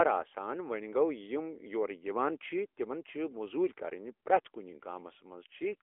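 From start to end, AMR narrowband mobile codec damage is plainly audible. Speech squeezed into a 300 to 3400 Hz line band sounds thin and buzzy, which fits roughly 10.2 kbps. A spectrogram shows nothing above 3.6 kHz.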